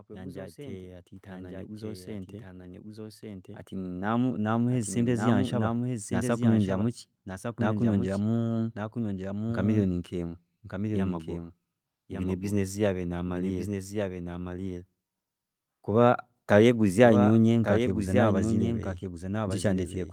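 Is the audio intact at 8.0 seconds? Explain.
No. At 8.0 seconds, as throughout the clip, the speech is heard twice: a second, somewhat quieter copy, roughly 5 dB down, trails the original by about a second, with none of the decay or room colour a real echo would carry. This is a doubled audio track, likely caused by the same signal being captured again through a slower path, or by an edit that leaves two copies mixed out of step.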